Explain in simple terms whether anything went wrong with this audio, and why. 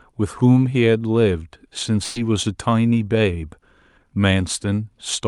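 One problem stands out: a burst of packet loss from about 2.03 to 2.18 s in this speech. For roughly 120 ms, a small run of the data carrying the sound never arrived in time. To cover the hole, the receiver stretched out the last bit of sound it had and faded it down, which comes across as a brief buzz or hiss. Then the speech picks up again, with that short stretch simply missing.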